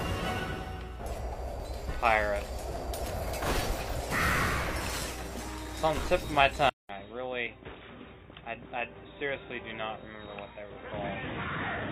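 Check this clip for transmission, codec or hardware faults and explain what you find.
The clip has three kinds of fault: short skips from lost buffers, two skipped codec frames, and a change to a poorer input device partway through.

Dropped buffer (overrun), at 1.6 s, 6.57 s and 9.2 s. Each is likely caused by the recording program failing to read its samples before the hardware reused that memory, so a short piece is discarded and the surrounding audio is butted together. The sound jumps forward with no gap, by roughly 20 ms at the first two points and about 10 ms at the third.

Compressed frames skipped, at 3.95 to 3.99 s and 8.0 to 8.04 s. At each point a single coded frame never reaches the output, either missing or rejected by the decoder, so about 40 ms of audio is lost, matching one 42.7 ms frame.

Input switched to a poorer device, from 6.69 s to the end. The recording most likely moved to a different, lower-quality input, with about 200 ms of silence at the changeover. 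After it, the narrower band makes the sound turn dull and boxy. The level drops by about 10 dB, and a new background noise sits roughly 30 dB below the signal.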